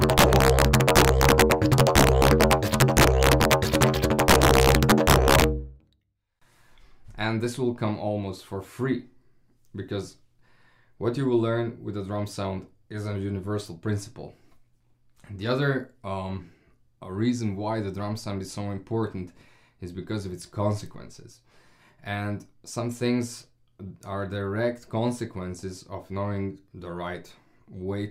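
From 0.02 s to 5.44 s the audio shows integer overflow. Where the signal was driven about 1 dB past the largest value the integer format can hold, the sum wrapped around to the opposite sign instead of being held at the limit, so each peak over that line flips across the whole range. It is heard as sharp cracks on the peaks, unlike clipping, which flattens the tops and gives a duller, fuzzier distortion.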